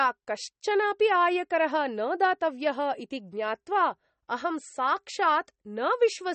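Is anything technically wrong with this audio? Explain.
Yes. MP3 compression runs throughout: nothing remains above about 8.4 kHz, and weak spectral detail flickers between frames, giving a watery, swirly texture with smeared consonant attacks and chirpy s sounds. The damage plainly fits a low bitrate around 32 kbps, likely the cause.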